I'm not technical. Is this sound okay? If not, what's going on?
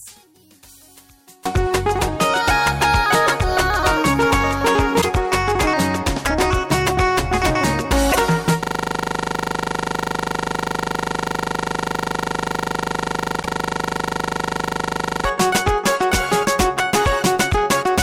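No. There are three separate problems.

For the first 1.46 seconds the sound is almost gone, leaving only a faint trace before it returns to full strength. This is a case of one channel inverted. One of the two stereo sides is most likely flipped upside down. When the two sides are combined, as on a phone speaker, most of what they share cancels out and little is left.

Three times there is a very short jolt, lasting about a twentieth of a second: from 5.00 to 5.05 s, from 8.11 to 8.16 s, and from 13.42 to 13.46 s. At each one the sound skips ahead with a brief chirp, burst of noise or tiny gap. This is likely a broken MP3 bit reservoir. MP3 files store the sound in small chunks of about 26 milliseconds, and each chunk borrows space from the ones before it. When chunks go missing, the next chunk picks up the wrong material and plays garbage for a moment.

From 8.64 to 15.25 s the sound turns into a rapid, rattling buzz. 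One tiny slice of sound, just 40 milliseconds long, repeats 25 times a second, about 177 times in total. This is a system hang loop. The computer froze, and the sound hardware kept replaying the same small piece over and over until the system recovered. The third jolt, at 13.42 s, falls inside this stretch.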